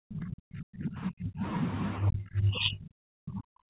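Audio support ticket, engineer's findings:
Speech suppressed in double talk, 0.00–1.43 s and 1.99–3.69 s: level collapses by about 40 dB. Likely echo canceller/suppressor clamping the near talker during overlap. Waveform shows flattened envelope; spectrogram shows faded bands, all below the 4 kHz ceiling of the narrowband G.711 call path.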